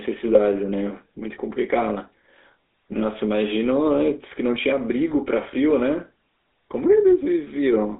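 From the start, the level swings by roughly 5 dB, with loud and quiet parts squeezed together. This is gain pumping, likely from gain set too high and a fast limiter pulling it back on each peak.

Throughout, the speech has a buzzy, gravelly roughness and a thin telephone band running from about 250 Hz to 3.7 kHz, with nothing above. The tone fits the GSM full-rate codec at 13 kbps, whose pulse-driven vocal-tract model produces this coarse texture.

From 0.32 to 0.41 s, the speech breaks into a brief squawk and gargle. These are GSM bit errors: corrupted filter, pitch or gain values reached the decoder, which points to a few damaged frames in a row.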